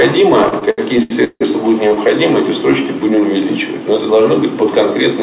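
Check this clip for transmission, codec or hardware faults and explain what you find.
Three jitter-buffer faults here, all on a narrowband call path that stops at 4 kHz, which fits G.711 mu-law.

From 0.44 to 1.43 s there's repeated stalling, a stutter: late packets drained the buffer eight times and the receiver kept extending the last sound. That's 387 ms of fill, up to 164 ms at once, so the audio drags.

At 1.89 to 1.92 s there's a short stall from a late packet: about 19 ms where the last sound is held until the packet arrives, giving a brief hang.

From 2.54 to 3.21 s there's a jitter buffer slow-down: pitch periods repeated to rebuild reserve, adding 73 ms. The sound plays at 90% speed, same pitch, slightly drawn out.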